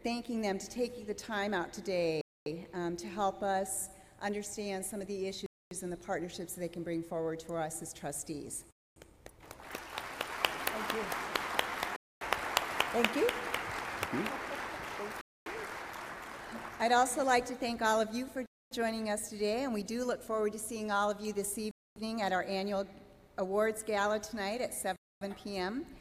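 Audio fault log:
2.21, 5.46, 8.71, 11.96, 15.21, 18.46, 21.71 and 24.96 s: gap between chunks. The audio arrives as 3-second blocks, and 250 ms of silence sits at every join, so a hole recurs every 3.25 s. Nothing is missing from the audio, but playback is interrupted at each boundary. That gives the holes a steady, mechanical rhythm rather than the uneven spacing of random dropouts.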